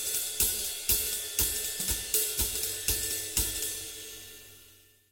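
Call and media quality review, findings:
No audible faults found; nothing to flag for follow-up.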